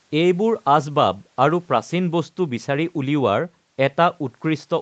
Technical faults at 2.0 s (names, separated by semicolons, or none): none